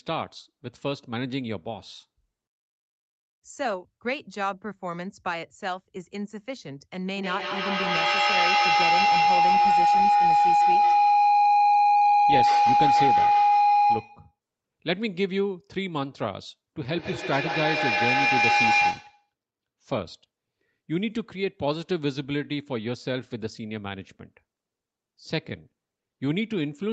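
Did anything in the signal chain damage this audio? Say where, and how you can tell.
Yes. From 7.16 to 14.38 s, and again from 16.9 to 19.33 s, a tone near 700 Hz swells to about 7 dB above the speech (about 6 dB in the second stretch), with the loop repeating roughly every 150 ms. This is feedback howl: two devices on one call share a room, and each microphone-to-loudspeaker trip adds gain at that favoured frequency.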